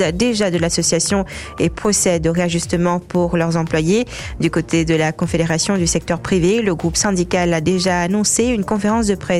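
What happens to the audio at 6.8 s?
Nothing goes wrong at 6.8 s; the audio plays through that moment intact, with no dropout, click, glitch or other fault.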